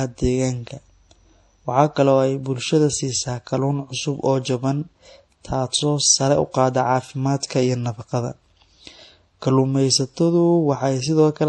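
Transcoding between lossy codecs runs through the whole speech clip. Nothing is present above about 11.4 kHz, and the sound carries two different kinds of coding damage at once. The likely cause is a low-rate HE-AAC encode, around 32 kbit/s, later re-encoded as MP3 at roughly 48 kbit/s. The MP3 stage spent its bits reproducing the earlier artefacts and added its own, and the lowest bandwidth limit in the chain stayed in place.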